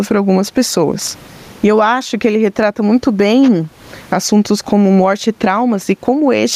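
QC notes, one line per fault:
Throughout gain pumping: gain swings roughly 20 dB and is pulled down under loud syllables, likely from excessive mic gain driving a fast limiter.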